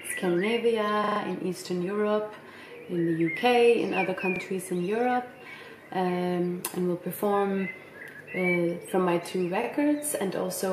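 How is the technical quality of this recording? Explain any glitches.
The recording has three short stutters, all from the same fault. At 1.04 to 1.2 s a brief stutter is heard, and at 4.36 to 4.4 s and 9.64 to 9.68 s there are single quick hiccups. Each is a repeated buffer. New audio arrived late, so the same 40 ms piece, which fits a 40 ms playback buffer, replayed with hard joins: four extra times in the first event and once in each of the others.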